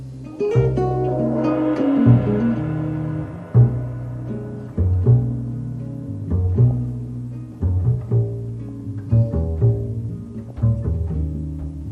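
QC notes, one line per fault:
Throughout, MP2 compression: plainly audible dull, gurgling, granular sound with upper bands flickering, likely from MPEG Layer II starved of bits, which fits an 80 kbps stream.
0.49–0.68 s, 4.61–4.73 s, 6.71–6.77 s, 8.69–8.80 s, 10.49–10.56 s, DAB burbling: brief bursts of burbling blips, as reception bit errors slip past error correction and corrupt individual sub-bands.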